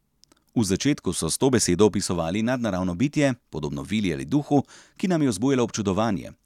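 No technical faults can be heard anywhere in the recording.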